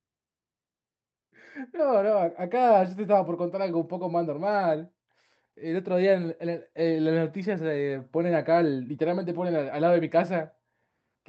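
Listening through this speech recording, which has passed through an Opus call path with its audio reaching up to about 8 kHz, nothing stood out as a technical problem.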